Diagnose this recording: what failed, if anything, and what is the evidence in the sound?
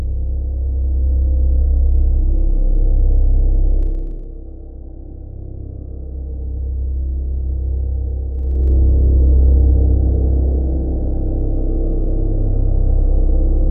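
Zipper noise at the gain stage: from 3.81 to 4.25 s the level falls about 10 dB, and from 8.33 to 8.77 s rises about 10 dB, in unsmoothed 1 dB steps roughly 30 times per second. Each jump clicks, showing as a staircase waveform envelope and faint evenly spaced vertical spectrogram lines.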